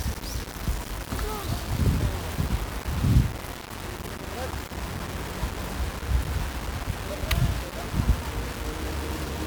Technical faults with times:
0.00-9.47 low bit depth without dither

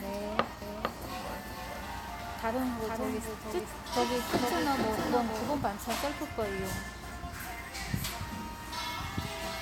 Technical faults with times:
0.62-5.58 doubled audio track

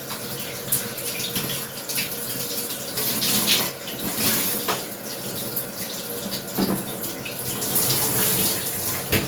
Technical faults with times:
0.00-9.28 Opus compression

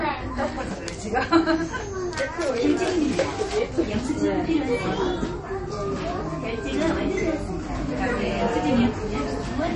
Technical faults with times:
0.00-9.76 MP3 compression

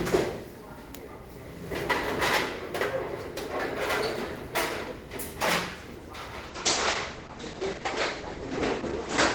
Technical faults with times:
6.44-9.35 call bitrate drop

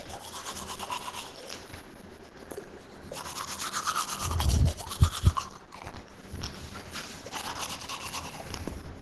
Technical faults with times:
0.00-9.02 Opus compression

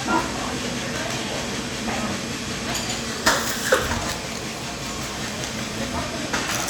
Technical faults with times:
none

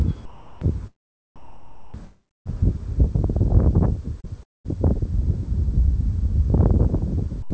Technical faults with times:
0.25-0.61 comfort noise in place of the background
1.36-2.50 comfort noise in place of the background
2.04-2.47 long network dropout
4.20-4.66 sound chopped by the voice detector
7.42-7.50 sound dropped by the voice detector

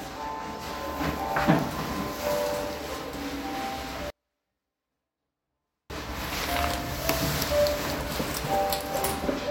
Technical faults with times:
4.10-5.90 24-bit alignment error (too quiet)

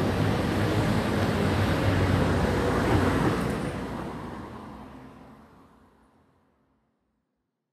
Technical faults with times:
0.00-7.73 Vorbis compression

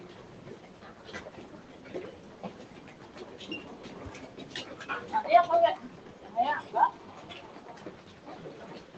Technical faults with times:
0.00-8.97 noise suppressor applied to music or sounds

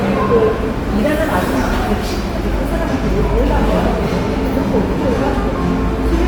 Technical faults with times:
0.00-6.27 Opus compression

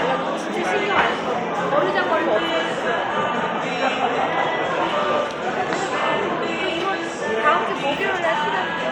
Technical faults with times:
none

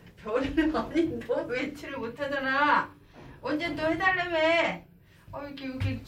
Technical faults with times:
none

